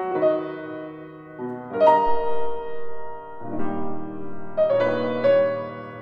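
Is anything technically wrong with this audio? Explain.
No, nothing technically wrong stood out on listening to this music.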